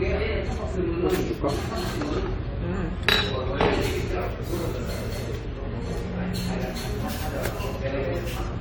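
An everyday sound recording with generation loss throughout. It sounds swirly, hollow and smeared, with blurred attacks. That fits audio that was likely decoded and re-encoded about seven times through AAC-LC at around 96 kbit/s, with noise building up on each pass.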